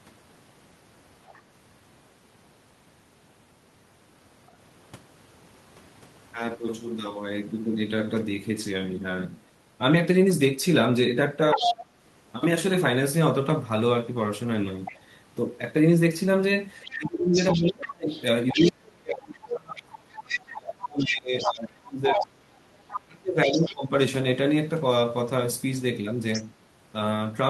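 A speech recording in which the other side's voice leaks through at six points: briefly and faintly at 1.26 s and 14.85 s, at roughly equal level to the talker from 11.52 to 11.86 s, for longer stretches from 16.83 to 18.71 s and 20.3 to 23.74 s, and again at 26.33 s. The likely cause is loudspeaker playback reaching the microphone and not being fully cancelled. What marks this out is an added second voice, sometimes quiet and sometimes nearly as loud as the talker. Speech is also suppressed in double talk, from 11.54 to 11.81 s and over a long span from 16.94 to 23.92 s, together about five seconds. There the talker's own voice dips sharply, by as much as about 30 dB. The likely cause is the echo canceller failing to separate the two voices and turning both down. Unlike the leakage, this fault takes sound away from the talker rather than adding another voice.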